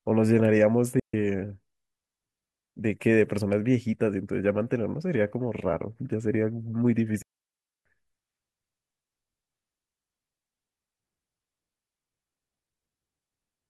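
Digital wireless dropouts at 0.99 to 1.14 s and 7.22 to 7.86 s: the receiver lost too much data and muted the speech, leaving clean near-silent holes of 143 ms and 0.63 s, with no noise bursts.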